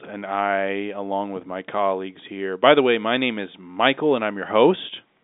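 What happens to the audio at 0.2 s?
Nothing goes wrong at 0.2 s: the speech carries on intact through the G.711 telephone coding, with its narrow line band of roughly 200 Hz to 3.7 kHz.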